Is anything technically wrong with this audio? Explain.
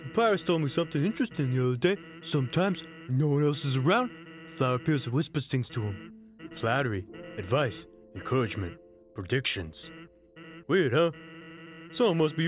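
No, nothing technically wrong can be heard in this audio. Nothing in it points to a problem with how it was captured, processed or delivered.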